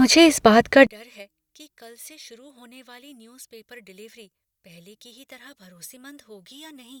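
The likely fault from 0.87 s, just after "इस बात का", to the end is one channel inverted. With one side's polarity flipped, the centred speech cancels when summed to mono, dropping by about 31 dB to a faint remnant of whatever differs between channels.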